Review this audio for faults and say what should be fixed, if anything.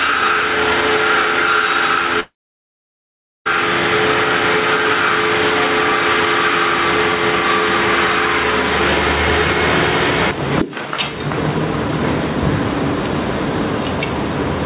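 Gain pumping runs through the whole clip. The level swings by roughly 15 dB. Loud and soft parts sit too close together, and the sound is squashed. The likely cause is input gain set far too high, with a fast limiter or compressor clamping each peak. To prevent it, lower the microphone gain so the limiter rarely engages.

A long network dropout runs from 2.2 s to 3.47 s. The sound stops abruptly and is carried on briefly as a fading buzz or hiss. Then there is near silence for about 1.2 s. The audio resumes at 3.47 s, but about 1.26 s of it is gone for good. Nothing here is repeated or recovered. The likely cause is packets that never arrived. To prevent it, use a more stable connection or add redundancy to the call.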